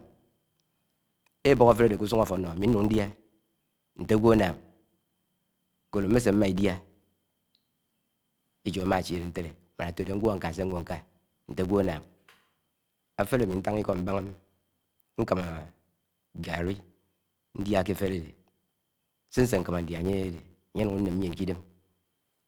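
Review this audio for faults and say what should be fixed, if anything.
Throughout the speech there is a steady buzz at about 86 Hz, made of fine ticks that grow louder and softer with the level of the voice. This is a filter restarted on every block: it loses its internal state at each block boundary and starts again from silence, so every block opens with a small transient. The tick rate fits a 512-sample buffer at 44.1 kHz. To prevent it, keep the filter's state variables between blocks rather than resetting them for each buffer.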